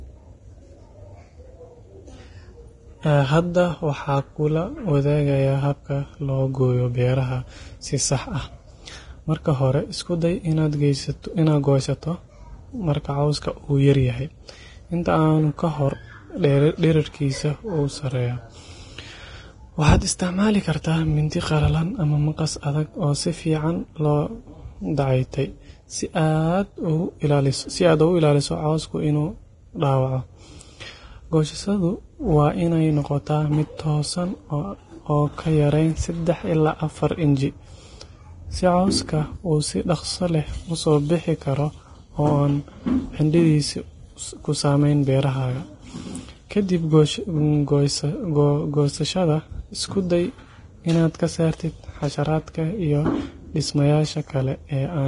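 From start to finish the speech sounds hissy and grainy, with roughened tones and blurred attacks, and nothing above 10.6 kHz. The likely cause is heavy Vorbis compression, which fits a bitrate around 30 kbps. At that rate the encoder lowers its cut-off and quantises the remaining treble so coarsely that fine detail turns into noise.

At 21.30 s a short hiss of about 16 ms slips in just ahead of a sharp attack, and the onset itself sounds softened and smeared. This is pre-echo. The transform block's quantisation noise, sized for the loud attack, spreads evenly back into the quiet moment before it.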